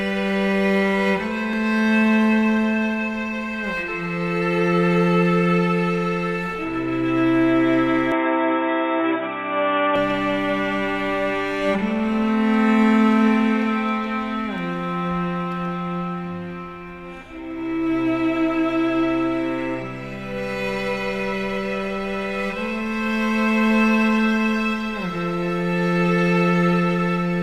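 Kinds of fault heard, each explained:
Input switched to a poorer device: The recording input likely changed mid-take to a lesser microphone or a headset call profile, which passes a much narrower band. From 8.12 to 9.96 s the sound turns dull and boxy, with nothing above 3.8 kHz, and a faint new background noise sits well below the signal. The change comes without any gap or noticeable jump in level, then the fuller sound returns.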